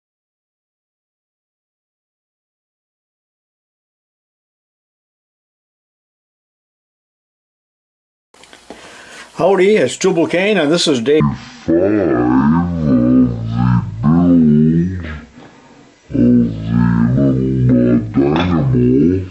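From 11.2 s to the end, there's a wrong sample rate fault: the sound drops to half speed and falls a full octave, 12 semitones, all at once. That fits 48 kHz material being played back at 24 kHz without any conversion.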